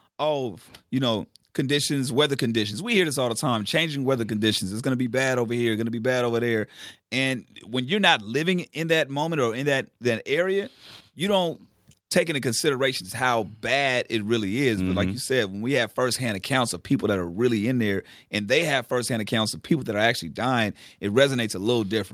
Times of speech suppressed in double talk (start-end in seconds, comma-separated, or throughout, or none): none